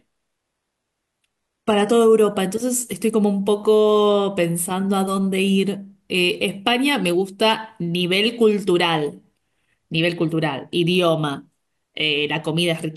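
A speech recording whose first 2.0 s show an adaptive stream starting at a low bitrate. From 0.0 s the treble is thin and partly synthetic, with a swirly, smeared top end and heavier coding artefacts, which fits a low-rate HE-AAC rendition of around 16 kbit/s using spectral band replication. At 2.0 s the quality jumps abruptly, with no gap, to full-bandwidth, cleaner audio consistent with an AAC-LC stream near 96 kbit/s, once the player has measured the connection.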